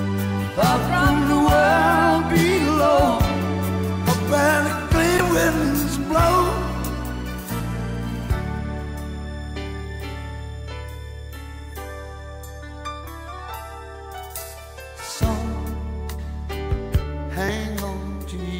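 Damaged data in a compressed stream breaks the audio at 5.17 to 5.20 s and 17.46 to 17.49 s: corrupted frames make the decoder lose sync, producing brief blips visible as narrow broadband smears.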